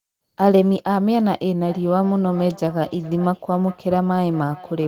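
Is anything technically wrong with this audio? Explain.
Yes. Feedback echo between two devices runs from 1.65 s to the end. Two devices on the same call share a room: one plays back what the other's microphone sent, and that microphone captures it again. Each device's echo canceller removes only its own playback, so this loop is left untouched. The speech returns roughly every 0.4 s, each repeat thinner and more ringing than the last, peaking about 20 dB below the direct speech.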